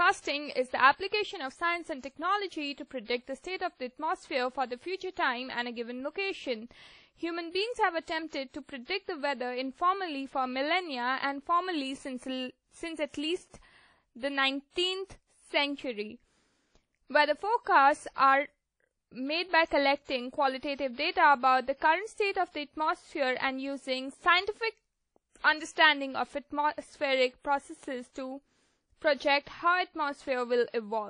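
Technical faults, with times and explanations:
Throughout, WMA compression: washy, ringing speech with breathing hiss and nothing above 10.1 kHz, likely a WMA encode starved of bits, fitting about 32 kbps.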